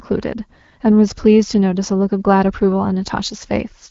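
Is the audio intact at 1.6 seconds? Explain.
Yes, at 1.6 s the speech is intact, with no fault at that moment.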